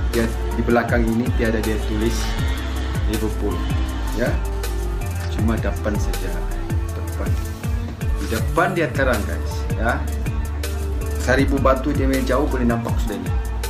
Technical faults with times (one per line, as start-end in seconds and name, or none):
4.52-7.35 GSM phone buzz